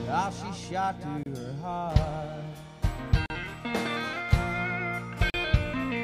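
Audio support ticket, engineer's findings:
Gap at a join of encoded pieces, three times: 1.23 s (28 ms), 3.26 s (40 ms), 5.3 s (40 ms). Spacing of 2.0 s points to separately encoded segments joined untrimmed, leaving encoder delay and last-frame padding. Sound resumes where it stopped; nothing is skipped, unlike a dropout.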